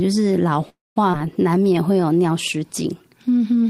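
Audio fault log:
0.69–0.98 s, call audio freeze: the sound stalls for about 266 ms. The last sound carries on briefly and fades, leaving about 200 ms of silence. It then resumes where it stopped, with nothing lost. The likely cause is delayed packets draining the jitter buffer.
1.12–1.15 s, skip ahead: playback jumps forward, with only about 10 ms filled at the join. Roughly a tenth of a second of audio is dropped, so the sounds either side meet almost directly, undoing part of the delay built up by the freeze.
1.18–2.01 s, jitter buffer slow-down: the receiver rebuilds its reserve by repeating single pitch periods and bits of pauses, adding 97 ms. The speech runs at about 89% speed with unchanged pitch, so sounds come out drawn-out.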